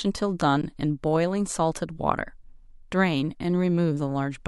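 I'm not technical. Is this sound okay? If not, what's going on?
No. At about 0.62 s there is an underrun with held sample: the playback system briefly ran out of audio to send, and the converter simply held its last value until more arrived. For about 17 ms the speech freezes on a flat, steady level, a tiny dropout rather than a click. No speech was lost; playback picked up exactly where it paused, so the resumption is soft, heard as a brief hitch.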